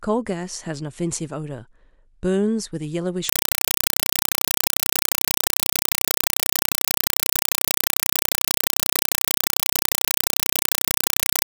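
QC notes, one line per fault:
3.29 s to 11.47 s, compressed stream played as audio: the speech gives way to very loud, chattering static that lasts to the end. The link is carrying undecoded AC-3 data, likely around 192 kbps, and that data is being treated as ordinary samples. Each frame comes out as a 4 ms burst of noise followed by zero padding. The bursts repeat 31.25 times a second, and that steady rhythm of noise and silence sets this apart from random bit errors or a constant hiss.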